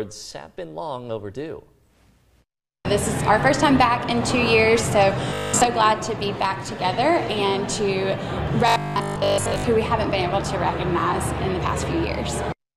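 Twice the sound turns into a flat, metallic buzz, from 5.30 to 5.66 s and again from 8.68 to 9.66 s. That's robotic sound from repeated short buffers, and it's likely caused by audio arriving too slowly, with the player looping the last 20 ms or so to fill the gap. Those repeats stamp a fixed 50 Hz drone onto the sound, and most of what should be heard in those stretches is simply skipped.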